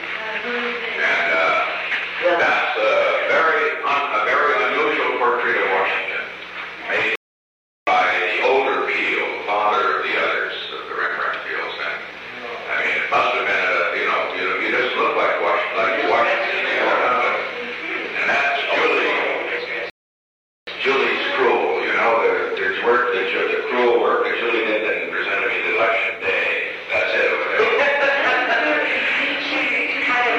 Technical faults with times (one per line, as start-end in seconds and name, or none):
7.16-7.87 rebuffering stall
19.90-20.67 rebuffering stall